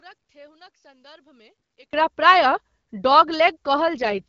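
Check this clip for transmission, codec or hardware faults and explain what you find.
Two faults are present in this speech clip, which runs over a wideband AMR-WB link.

From 0.0 to 1.93 s, the speech is about 26 dB quieter and sounds faint. The likely cause is one channel inverted. One stereo channel has reversed polarity. When the two channels are summed to mono, everything they share cancels. Centred speech and low frequencies almost disappear. What remains is only the small difference between the channels, heard as a weak trace of the speech.

From 3.95 to 4.23 s, the speech turns rougher and more synthetic. There is no gap and no loss of bandwidth. This is an AMR rate drop. The link asks the codec to spend fewer bits on the speech itself and more on error protection. The sound fits a fall from 12.65 to 6.6 kbit/s. The coarser model of the vocal tract leaves a raspy edge until the rate goes back up.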